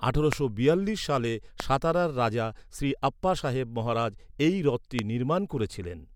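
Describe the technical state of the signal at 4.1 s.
At 4.1 s the speech signal is intact, with no audible fault at that moment.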